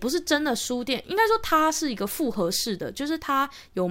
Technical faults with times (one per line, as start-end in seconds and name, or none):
none